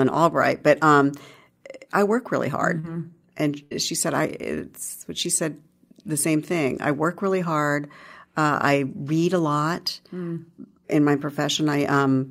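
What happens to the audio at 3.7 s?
A burst of packet loss hits from 3.63 to 3.73 s. Several packets went missing in a row, so the receiver stretched the last sound it had for about 74 ms, fading it down, then resumed with roughly 80 ms of speech skipped.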